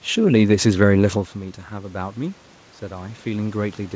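Speech, carried over a call path whose band stops at 8 kHz, consistent with G.722 at 64 kbps. Automatic gain rising runs from 1.69 to 3.86 s: after the talker moves away around one second and the input falls about 14 dB, the gain control slowly adds about 5 dB, so the voice and the room noise swell together.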